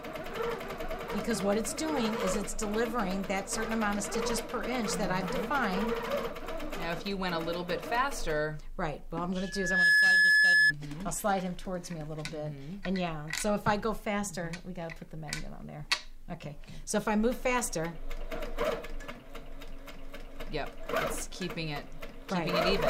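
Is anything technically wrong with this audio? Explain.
Yes. From 9.38 to 10.73 s there is loudspeaker feedback squeal. The microphone is picking up the loudspeaker it feeds, and at 1.7 kHz the loop gain rises past one. That tone swells over about half a second into a piercing squeal, peaking about 10 dB above the rest of the sound.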